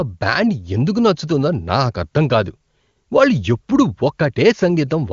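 Nothing goes wrong in this speech, and the HD Voice coding holds up well, with a clear wideband sound that points to one of AMR-WB's higher rates.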